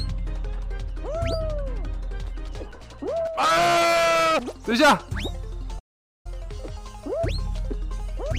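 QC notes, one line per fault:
5.79–6.26 s, playback stall: the audio cuts to silence mid-flow for about 0.46 s, then carries on. The gap points to a likely cause of the player running out of buffered data, or its output thread being blocked, until output resumed.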